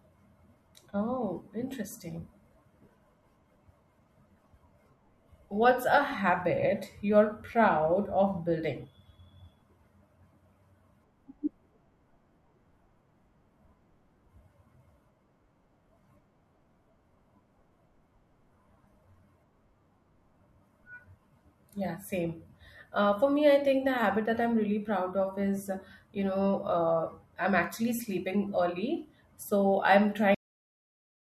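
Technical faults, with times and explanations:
30.35 s, cut-off end: the speech stops mid-sound and drops straight to digital silence with no decay, since the final buffers never got written.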